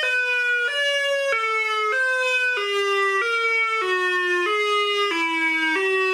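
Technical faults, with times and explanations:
No technical faults are audible anywhere in the audio.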